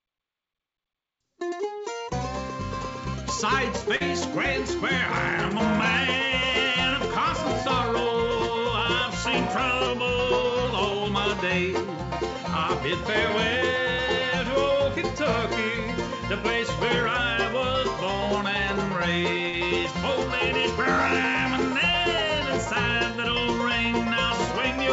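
From 3.96 to 4.03 s a brief smear passes over the sound. This is short concealed packet loss: about 40 ms never arrived, and the decoder stretched the preceding sound across the hole.

From 9.87 to 10.65 s everything sags about a semitone (roughly 101 cents) and runs 5.7% slow. This is likely a drift correction step, changing the playback rate at once to rebalance the buffer.

From 19.49 to 19.56 s the last sound is held and fades, then the audio picks up further along. This is a burst of packet loss, with about 40 ms dropped and covered by a decaying continuation.

Throughout, nothing is heard above 8 kHz, which fits a G.722 call path.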